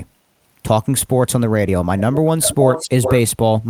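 From 1.98 to 2.17 s a faint delayed copy of the speech trails 347 ms behind, well below the direct sound. From 2.41 to 3.16 s it returns at the same delay, much louder and close to the speech itself. This echo leak is likely loudspeaker pickup at the far end that its echo canceller failed to remove.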